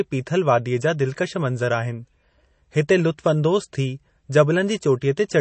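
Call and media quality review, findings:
Watery, swirly speech for the whole clip, nothing above 8.3 kHz, so sibilants sound dull and chirpy. Likely MP3 compression starved of bits, which fits a low bitrate around 32 kbps: treble chopped off, weak frequency lines flickering frame to frame.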